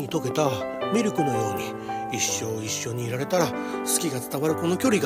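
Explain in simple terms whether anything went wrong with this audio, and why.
A train of clicks runs from 0.09 to 0.97 s: about five evenly spaced ticks, 4.6 per second, likely interference from nearby equipment or a faulty connection or power supply.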